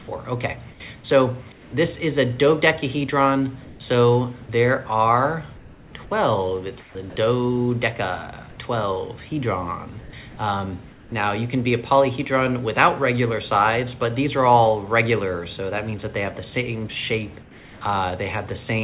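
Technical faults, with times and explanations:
0.71–1.73 s, 3.65–4.49 s, 5.57–5.93 s, 6.80–6.95 s, 10.01–11.12 s, 17.42–17.81 s, comfort noise in place of the background: in these pauses the real background gives way to a smooth, featureless hiss, about 3 to 5 dB quieter where it can be measured. This is likely discontinuous transmission, with the receiver synthesising shaped noise while the sender is silent.
4.46–4.49 s, sound dropped by the voice detector: at the tail of that comfort-noise stretch, about 20 ms of actual sound vanishes into the same steady noise before returning. The sender's voice detector likely judged the quiet sound to be background and stopped transmitting too early.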